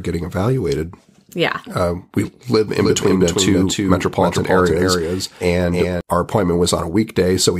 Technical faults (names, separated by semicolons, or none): doubled audio track